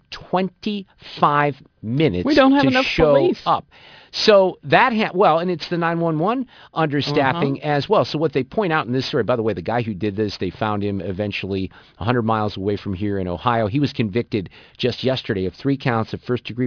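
Aliasing runs through the whole clip. The speech was resampled to a lower rate without a low-pass filter first; the band edge sits at 5.5 kHz, which points to a rate of about 11 kHz. Content above 5.5 kHz folds back down as false, unrelated frequencies around roughly 20 dB below the speech. Sibilants turn gritty and metallic, and energy crowds right up to the 5.5 kHz edge.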